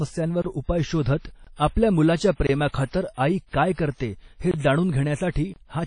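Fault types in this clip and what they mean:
WMA compression: The speech is band-limited, with nothing above 10.1 kHz, and carries plainly audible transform-codec damage: ringing, washy smearing and hiss that moves with the signal. This is likely low-bitrate WMA encoding, consistent with about 32 kbps.
Gap between chunks: Silent holes of about 23 ms interrupt the speech at 3.49 s, just before "काय करते हे जाणून", and at 4.51 s, just after "आई काय करते हे". They are 1 s apart, matching playback in one-second chunks with a delay at each join.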